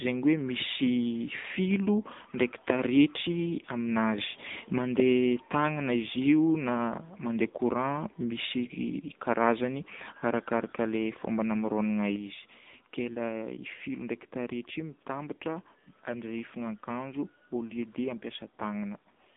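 Speech, carried throughout by the AMR narrowband mobile codec. The band is confined to roughly 200 Hz to 3.7 kHz, with nothing at all above 3.8 kHz, so sibilants lose their edge and the sound takes on a boxed-in telephone quality. The coding damage is plainly audible: a buzzy, synthetic texture from the pulse-excited vocal-tract model. That degree of damage fits a low AMR-NB mode around 7.95 kbps, where too few bits describe each 20 ms frame.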